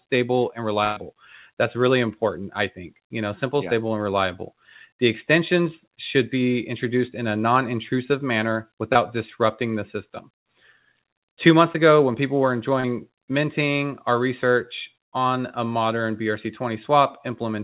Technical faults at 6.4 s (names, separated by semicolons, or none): none